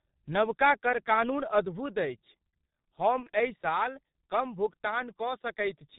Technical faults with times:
0.00-5.98 G.723.1 codec
1.65 microphone volume stepped down
3.23-3.29 VoIP packet loss concealed by the speech codec

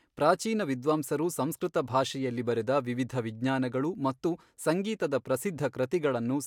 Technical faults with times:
none

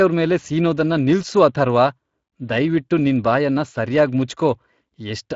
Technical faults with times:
0.00-5.36 Speex codec

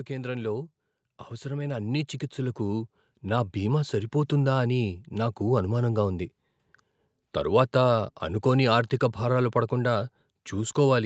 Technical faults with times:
0.07-6.32 automatic gain rising

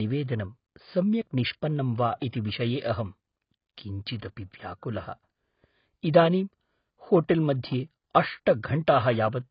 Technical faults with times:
0.00-9.50 AAC compression

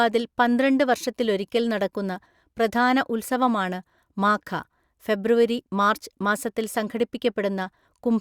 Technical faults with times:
none

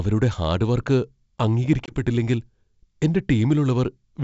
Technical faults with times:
1.86-1.94 packet loss on an ADPCM call

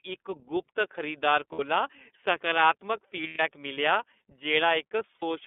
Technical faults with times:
0.00-5.46 iLBC codec
1.52-1.60 lost iLBC frames
3.27-3.40 lost iLBC frames
5.16-5.23 lost iLBC frames

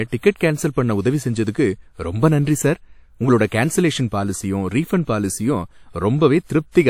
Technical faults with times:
3.47-3.52 pre-echo
6.45-6.49 pre-echo

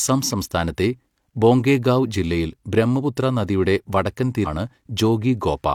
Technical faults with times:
4.42-4.47 stream segment skipped

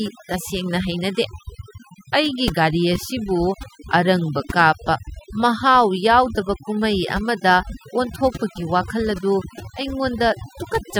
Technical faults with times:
0.00-11.00 overdone noise removal

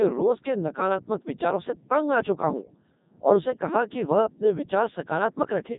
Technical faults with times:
0.00-5.78 Codec 2 vocoder

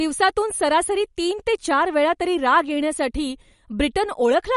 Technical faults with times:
0.00-4.56 MP3 compression

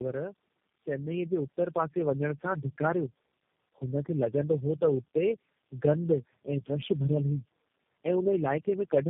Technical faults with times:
0.00-9.10 tandem speech coding

